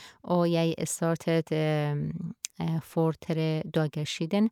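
Nothing technically wrong can be heard in this speech recording, and the signal shows no faults at any point.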